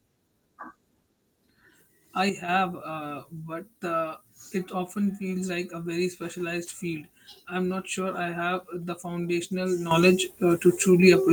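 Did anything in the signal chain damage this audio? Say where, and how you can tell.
Yes. A digital gain stage, likely a level setting applied in the driver or processing without a ramp, caused two sudden gain jumps. At 2.29 s the level drops by about 8 dB and snaps back at 2.49 s. At 9.91 s it rises by about 10 dB and stays there to the end of the clip. The speech and the background noise step up and down together, from one sample to the next, rather than fading.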